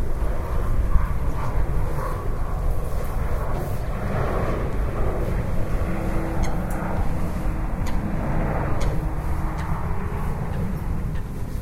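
No technical faults are audible anywhere in this recording.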